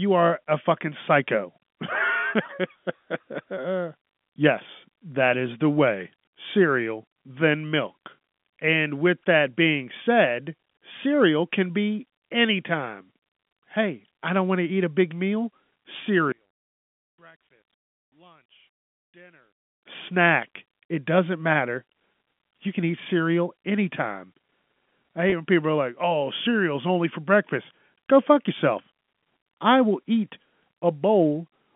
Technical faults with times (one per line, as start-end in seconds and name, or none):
16.32-19.83 one channel inverted
25.30-25.32 packet loss with pitch repetition